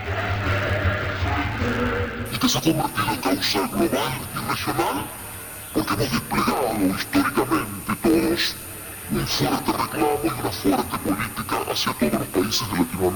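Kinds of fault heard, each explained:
Interleaved audio read as planar: Each block's alternating left and right samples are split into halves, and each half plays at half speed. Blocks here last 11.61 ms, which fits 512-sample blocks. The sound is dull and robotic throughout. It buzzes at 86.1 Hz, with no clear octave drop.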